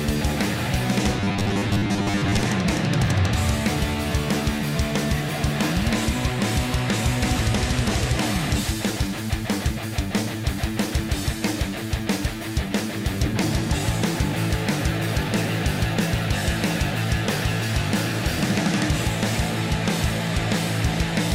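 From 1.2 to 2.41 s, new audio likely arrived too seldom, so playback kept looping a 10 ms fragment while most of the real signal was skipped. The result is robotic sound from repeated short buffers: a rigid, metallic buzz fixed at 100 Hz.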